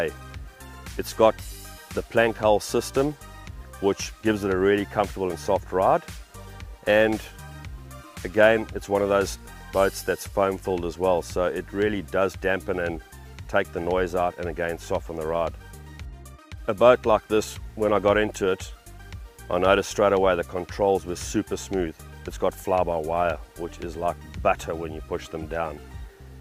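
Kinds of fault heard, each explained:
No technical faults can be heard in this audio. Careful listening turns up nothing that needs to be listed here.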